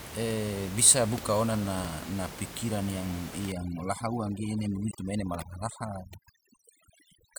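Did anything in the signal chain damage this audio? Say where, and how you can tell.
Yes, two separate problems.

The first is at the codec or storage stage: damaged data in the compressed stream. There's a brief glitch from 1.84 to 1.87 s and a tiny one at 4.91 s. That means some bytes in the encoded stream were lost or overwritten. The decoder chokes on those frames, loses sync, and has to hunt for the next valid frame header before clean audio resumes.

The second is overdone noise removal, running from 3.52 s to the end of the clip. The room noise sits about 13 dB below the speech, and the noise reducer has been pushed too hard against it. Any frequency band near its noise estimate gets slammed down or shut off, taking the quieter parts of the speech with it. You can hear the background drop and break up into twinkly specks.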